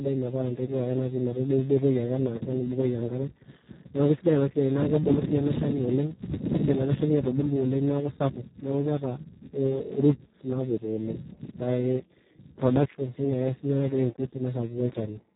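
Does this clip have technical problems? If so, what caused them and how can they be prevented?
Yes. Throughout the speech, the Speex codec damage is heavy. Its excitation is starved of bits, so the speech sounds noisy and hoarse, which points to a rate near 4 kbps. Nothing sounds above 3.9 kHz. A plain low-pass filter would muffle the top but keep the speech clean. Prevent it by running Speex at a higher quality setting or using a modern wideband codec.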